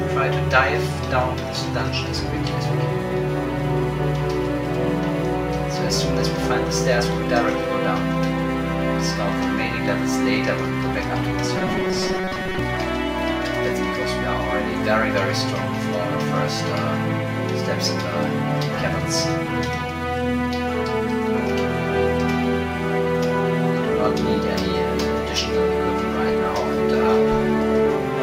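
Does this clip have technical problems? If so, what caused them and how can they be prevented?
Yes. From 11.57 to 12.59 s, new audio likely arrived too seldom, so playback kept repeating its last short block while most of the real audio in that stretch was skipped. This produced robotic sound from repeated short buffers. The repeats impose a fixed 188 Hz buzz, which fits a block of about 5.3 ms. The result is a rigid, metallic tone that follows the original only roughly. Larger buffers and an audio thread that is never starved of processing time would prevent it.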